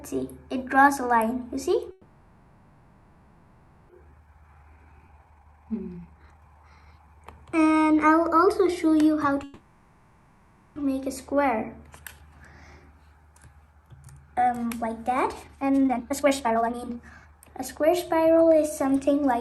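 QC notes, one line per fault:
1.91–3.91 s, call audio freeze: the last sound is stretched into a fading buzz for 1.98 s, likely from held-up packets emptying the jitter buffer; playback then resumes where it stopped.
4.05–7.22 s, jitter buffer speed-up: pitch-period pieces are cut repeatedly, running audio at 142% speed with pitch unchanged, removing roughly one and a half seconds of built-up delay.
5.08 s, skip ahead: playback jumps forward past roughly 0.7 s of audio with a near-seamless join, dropped while later audio was already queued.
9.44–10.78 s, call audio freeze: a 1.32 s fading continuation of the last sound fills the gap, likely from stalled packets, then audio continues with nothing lost.
15.43–17.83 s, jitter buffer speed-up: repeated removal of short pitch-period segments plays audio at 154% speed at unchanged pitch, sounding hurried while trimming roughly one and a half seconds.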